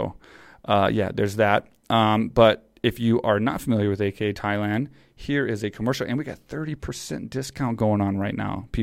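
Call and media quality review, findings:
No faults found in this speech recording.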